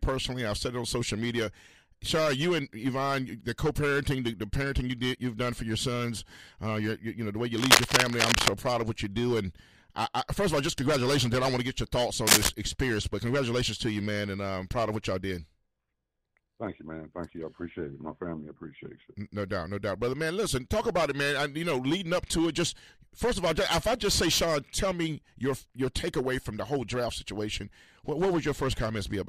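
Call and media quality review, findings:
Cable scratch noise, 7.57–8.48 s and 12.27–12.49 s. Dense, uneven scratching bursts sitting above the sound, the second shorter but louder. Likely a worn cable or connector being moved, contact resistance fluctuating rapidly and injecting noise into the signal path.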